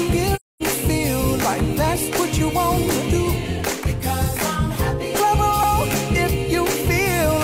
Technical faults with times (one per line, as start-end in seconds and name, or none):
0.35-0.63 AAC frame loss with muting
3.59 repeated buffer
5.63 repeated buffer